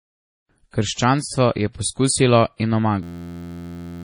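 The speech sounds watery and swirly throughout, with a dull top end: nothing is present above 10.6 kHz, and s sounds come with metallic chirps. The likely cause is heavy MP3 compression. When the encoder runs short of bits, it cuts the treble at a fixed frequency and drops weak frequency components, which then flicker in and out from frame to frame. The depth of the damage fits a very low bitrate of around 32 kbps.

At 2.57 s, just after "je poskusilo", a brief hiss of about 32 ms runs ahead of a sharp attack, and the attack itself sounds softened. This is pre-echo. The codec spreads its quantisation noise across a whole block, so noise sized for the loud onset also fills the quiet stretch just before it.

From 3.03 s to 4.03 s, right after "je poskusilo in", the audio turns into a steady buzz at 86.1 Hz. This is a system hang loop. The system froze while the sound hardware kept replaying the same 11.61 ms piece of its ring buffer, which fits a 512-sample buffer. 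The real audio for about one second is lost.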